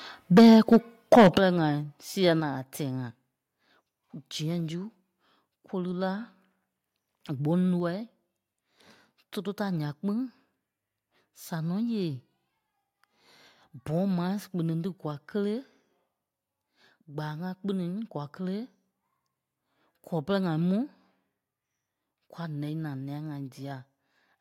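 From 0.37 to 0.77 s and again from 1.12 to 1.38 s, the loudest syllables turn harsh and crackly. The likely cause is microphone overload, with peaks driven about 10 dB and then about 8 dB past the converter's limit, flattening roughly a tenth and then roughly a sixth of the waveform. Unlike codec distortion, the grit tracks the peaks exactly.

The level also drops in single clean steps, likely a microphone volume step-down by the call software: about 3 dB at 0.38 s, about 10 dB at 1.38 s, about 3 dB at 2.40 s, and about 2 dB at 7.80 s. Voice and background fall together and stay down, which separates this from a fade or momentary dropout.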